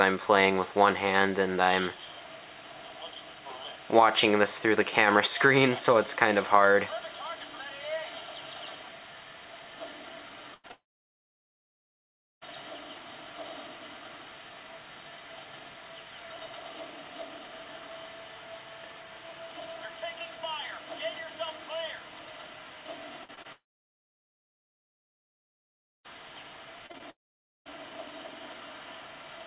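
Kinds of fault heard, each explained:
Burst of packet loss: About 100 ms of the call went missing in one run, from 10.54 to 10.66 s. The receiver held the last sound and let it fade into a short buzz or hiss. The audio then resumes further on, with that stretch gone.
Short concealed packet loss: Right after, from 10.68 to 10.71 s, about 20 ms failed to arrive in time. The decoder patched the hole by extending the preceding sound and blending back. It comes across as a brief smear or wobble rather than a clear gap.
Long network dropout: Three long stretches fall almost silent, at 10.71 to 12.43 s, 23.52 to 26.06 s and 27.10 to 27.67 s. Each opens with a brief fading continuation, then near-silence for most of it. A network dropout is the likely cause. The audio returns without the lost part.
Repeated packet loss (robotic sound): From 23.23 to 23.46 s, three gaps, the longest 51 ms, leave about 40% of the span patched. 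From 26.86 to 27.72 s, five shorter gaps follow. Each repeats the last sound briefly, giving choppy audio with pieces missing.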